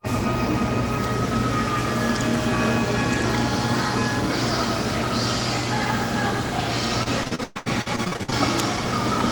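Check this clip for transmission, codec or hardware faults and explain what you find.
One transmission fault is present. From 7.03 to 8.34 s there is repeated packet loss with a robotic sound. Fifteen short gaps, the longest 117 ms, are patched by extending the previous sound. About 42% of that stretch is filled this way, so the sound turns choppy.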